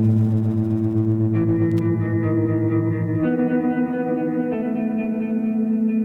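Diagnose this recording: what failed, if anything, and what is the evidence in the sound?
Loose connector crackle in the analogue wiring. An irregular burst of scratchy crackle cuts into the music from 1.71 to 1.79 s. A worn contact is making and breaking, chopping the signal.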